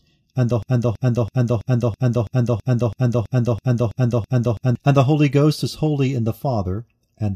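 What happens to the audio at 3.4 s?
At 3.4 s the speech is stuck in a broken-record loop from 0.63 to 4.75 s, after "and the". A 0.33 s fragment, likely from a stalled stream resending its last buffer, repeats 13 times, showing as identical waveform blocks.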